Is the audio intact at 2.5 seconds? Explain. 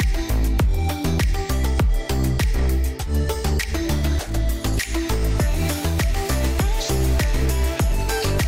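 Yes, the audio at 2.5 seconds is intact, with no dropout, click, distortion or other fault at that point.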